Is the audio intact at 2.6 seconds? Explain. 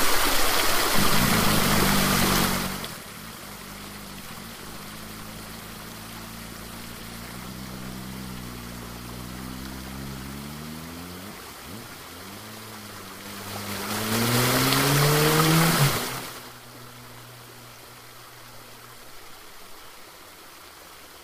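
No. From 2.42 to 3.02 s the sound carries a rapid ticking, a zipping texture that rides on it while its level drops by around 20 dB. This is zipper noise: the level change is applied in coarse, unsmoothed steps of about 3 dB, roughly ten times a second, rather than as a continuous fade. Each abrupt jump in gain leaves a small click, and the run of clicks produces the zipping.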